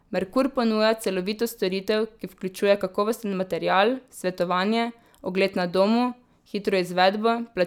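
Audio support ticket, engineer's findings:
Buzz at 100 Hz under speech throughout, gone in pauses. Resampler restarted on every block: 10 ms blocks converted independently, likely 44.1 to 48 kHz, each edge error-bearing. Spectrogram: 100 Hz harmonic comb during speech only; waveform: periodic edge glitches.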